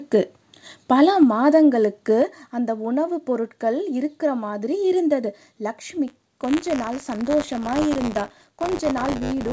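At 1.23 s the speech and the room behind it drop abruptly, by about 3 dB. That is a microphone volume step-down, likely the call software lowering the device's input volume in one move after judging the level too hot. Nothing in the sound itself changes except its loudness.

At 1.54 to 1.56 s a brief microphone overload adds a harsh, crackly edge to a peak. The waveform tops run past the converter's limit by about 1 dB, so a small share of samples are flattened. A mic gain set too high is the probable cause.

At 2.22 s a second step-down follows, larger this time, about 5 dB. Everything falls away at once, as if the microphone were pulled back. The software appears to be reacting to the clipped peak just before it.

From 6.07 s to the end, buffer tearing sets in. A steady, robotic rattle at 100 Hz rides on the speech. It is present only while there is sound. In each buffer period a small slice, roughly a twentieth, is replaced with audio from about 30 ms earlier, with hard joins on both sides. 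That pattern fits a writer and reader slipping in a ring buffer. Underneath, the call codec limits the band, with nothing above 8 kHz, consistent with G.722.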